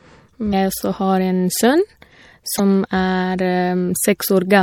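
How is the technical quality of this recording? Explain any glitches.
The technical quality is poor: the speech carries plainly audible coding damage throughout, and two brief glitches break the stream.

The whole clip has a watery, swirly texture with smeared consonant attacks, most likely from MP3 compression at a bit budget that fits roughly 64 kbps. The encoder drops the treble above a fixed cut-off and switches weak frequency lines on and off between frames. On a spectrogram this shows as a hard ceiling and flickering holes.

At 0.49–0.53 s and 2.56–2.60 s, damaged data in the compressed stream produces a short chirp or squawk. Corrupted bytes make the decoder misread frames and lose sync until it finds the next header. Each appears as a brief smear or gap in the waveform and spectrogram.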